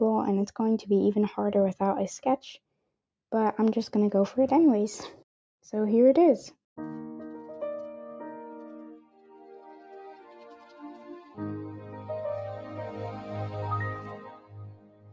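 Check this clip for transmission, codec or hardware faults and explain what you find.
The main problem is a speech-tuned noise suppressor left running on non-speech audio. It treats sustained tones and ambience as noise, so levels swing by around 10 dB. Onsets punch through while held parts sag, giving a pumping, fluttery, thinned-out feel.

There are also moments where the suppressor cut the sound harder than elsewhere. It drops by about 16 dB at 8.96–9.94 s, about 10 dB at 10.12–11.4 s, about 6 dB briefly at 11.8–11.95 s, and about 18 dB from 14.0 s to the end. Sustained and decaying material sinks or gets its tail chopped there. The call microphone processing shows as a top end that stops at 8 kHz and a loss of the lowest bass, which is normal and not a fault.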